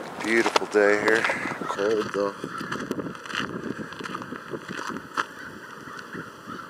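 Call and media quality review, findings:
Channel delay (comb filtering) from 1.75 s to end. Sound turns hollow and phasey. Fixed notches, the first near 700 Hz, repeating at about 1.4 kHz spacing. Probable component: stereo-to-mono downmix. One channel arrives roughly 0.7 ms late. Summing cancels shared content at evenly spaced frequencies.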